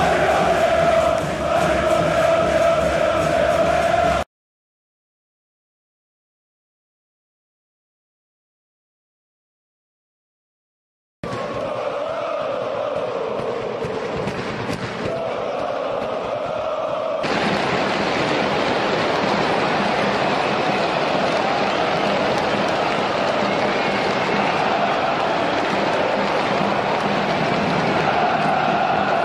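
No technical faults can be heard anywhere in the audio. Nothing interrupts or disturbs the sound at any point.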